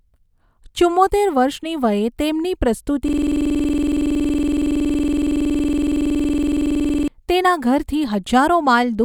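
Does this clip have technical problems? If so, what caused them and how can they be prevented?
Yes. From 3.08 to 7.08 s, after "વર્ષની વયે તેમની પ્રસ્તુતિ" and before "તેના ઘરથી", the speech turns into a steady 21.5 Hz buzz. This is a system hang loop: the stalled driver left the hardware replaying one 46 ms piece of audio, which fits a 2048-sample buffer. To prevent it, keep the audio thread from stalling and use a watchdog that mutes output when the buffer stops refilling.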